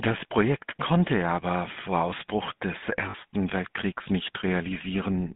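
Throughout, the speech passes through the GSM full-rate codec, consistent with 13 kbps coding, band-limited to 150 Hz to 3.6 kHz, giving a plainly buzzy, gravelly roughness. From 3.10 to 3.15 s, lost GSM frames are concealed by repeating the last good frame, heard as a brief rough, metallic ring lasting about 40 ms, which fits two dropped frames.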